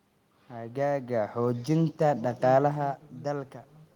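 Nothing stood out on listening to this speech recording; the only things heard are the room's own background noise and the talker's level shifting as they move near the microphone, once early on and again around two and a half seconds.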